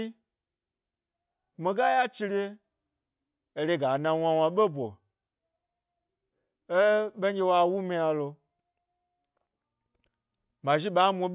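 No technical faults can be heard in this recording.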